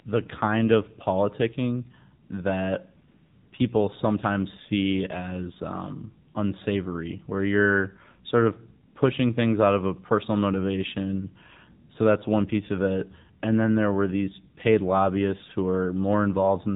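From start to finish the speech has passed through the AMR narrowband mobile codec. Everything is band-limited by 8 kHz sampling, so a spectrogram shows a hard ceiling at 4 kHz with nothing above it. The vocal-tract model is fed with very few excitation pulses per subframe, and the result is plainly audible: a buzzy, synthetic voice whose texture points to a low AMR-NB mode, consistent with 7.4 kbps.

AMR comfort noise appears four times: at 2.26 to 2.30 s (40 ms), 3.08 to 3.52 s (440 ms), 6.32 to 6.34 s (20 ms) and 8.88 to 8.96 s (80 ms). At each point the link judged the talker silent and stopped sending speech frames. The receiver then filled the gap with generated noise built from a rough level-and-spectrum description. The real background gives way to a smooth, even hiss that switches in and out. On a waveform each gap is a flat, steady low-level band with abrupt edges. On a spectrogram it is a uniform, featureless wash with no detail from the real background.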